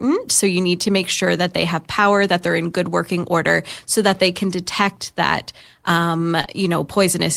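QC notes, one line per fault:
6.41 to 6.49 s, short concealed packet loss: right after "can detect that um", two back-to-back 20 ms gaps got patched by stretching the last sound, giving a quick smeary wobble.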